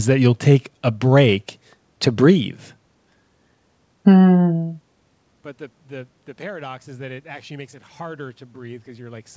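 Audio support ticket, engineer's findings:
No faults found in this call.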